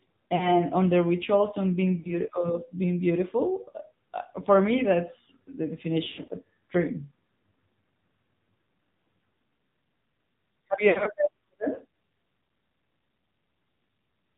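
The whole recording carries the AMR narrowband mobile codec: nothing passes above 4 kHz, and the speech has a buzzy, synthetic edge that points to a low rate near 7.4 kbps. Lost AMR speech frames follow. At 0.36 to 0.57 s, just before "on the rituals on", and at 2.00 to 2.15 s, between "the rituals on being" and "of being", about 40 ms goes missing, consistent with two 20 ms frames, heard as a brief dip or warble. At 6.04 to 6.28 s, about 160 ms is lost, scattered, with the longest gap 100 ms, so the decoder stretches the last sound and fades it out. At 10.90 to 11.09 s, 100 ms is lost in gaps of up to 60 ms, with the same drawn-out fading before speech returns weak or rough.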